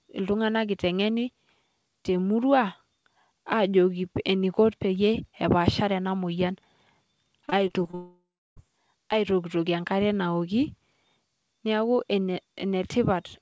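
From 7.46 to 7.95 s, repeated packet loss (robotic sound) sets in: audio keeps arriving late or not at all, and each hole, up to 21 ms, is patched by stretching the preceding sound. What sounds like five short holes covers about 18% of the span, so the speech turns choppy, with pieces missing.

From 7.95 to 8.58 s, the audio stops for about 0.6 s, most likely a long network dropout. The last sound is carried on as a fading buzz or hiss, then roughly a third of a second of silence follows before speech resumes with that stretch missing. Throughout, the G.722 call path passes nothing above 8 kHz.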